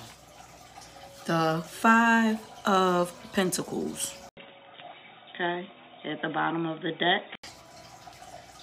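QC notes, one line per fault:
4.29–7.43 s, input switched to a poorer device: A gap of 80 ms opens the section. After it the sound turns dull and boxy, with nothing above 3.8 kHz. The loudness stays much the same. A faint new background noise sits far below the signal. The likely cause is the recording input changing mid-take to another microphone or a headset call profile, whose narrow band and own noise floor replace the original. Full bandwidth returns at 7.43 s.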